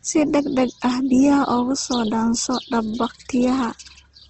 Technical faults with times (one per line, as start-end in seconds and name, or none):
0.00-4.30 Opus compression